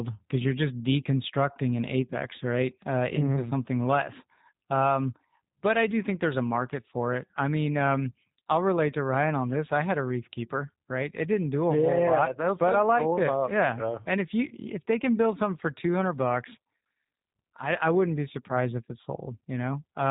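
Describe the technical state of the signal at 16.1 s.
At 16.1 s, as throughout, the speech passes through a G.729 codec that models voice from a filter and sparse pulses, cutting everything above 3.8 kHz and leaving a rough, synthetic edge that fits an 8 kbit/s coder.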